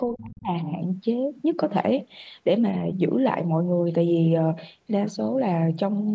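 A short speech recording with a clear problem right at the start. From 0.11 to 0.51 s the talker's level sinks hard, by something like 35 dB at the deepest point, so for roughly four tenths of a second the voice dips before it comes back. That's the classic sound of speech suppressed in double talk, likely an echo canceller that couldn't tell this talker apart from the far end's loudspeaker echo while both spoke and clamped down on everything. The call microphone processing is audible in that the band stops at 8 kHz.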